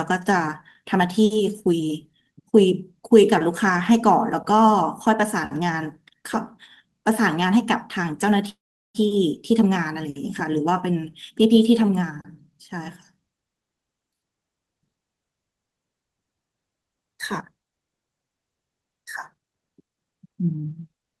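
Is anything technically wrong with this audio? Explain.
Yes, two faults.

From 8.49 to 8.97 s there is a call audio freeze, likely from delayed packets draining the jitter buffer. A brief fading buzz gives way to about 0.39 s of near-silence, a flat gap in the waveform and a blank spectrogram column.

From 19.34 s to the end, a jitter buffer speed-up trims pitch-period slices to shed excess delay. The sound runs about 18% faster at unchanged pitch, with spectrogram harmonics compressed in time but not shifted.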